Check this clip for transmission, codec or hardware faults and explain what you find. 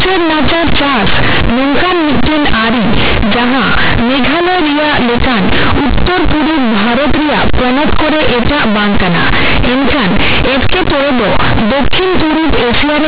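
One fault runs through the whole clip, on top of mu-law G.711 telephone coding at 8 kHz: companded audio read as linear. The mu-law bytes are played as raw 8-bit samples without expansion, so the speech sounds harsh, loud and buzzy, with noise filling the pauses. The waveform is a dense block where pauses look as tall as speech, and the spectrogram shows broadband smear up to 4 kHz.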